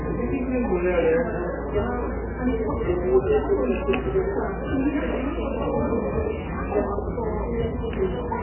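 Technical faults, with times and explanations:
Throughout, MP3 compression: the sound is watery and swirling, with nothing above 3 kHz and smeared, blurry attacks. This likely comes from heavy MP3 encoding at a very low bitrate, about 8 kbps, which cuts the treble and lets weak frequency lines flicker between frames.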